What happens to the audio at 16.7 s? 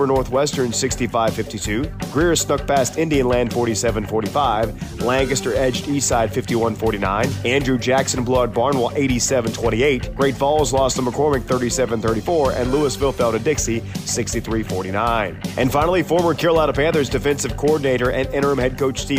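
Nothing goes wrong at 16.7 s; the audio plays through that moment intact, with no dropout, click or distortion.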